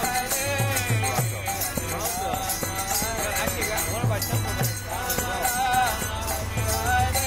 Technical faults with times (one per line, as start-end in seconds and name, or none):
none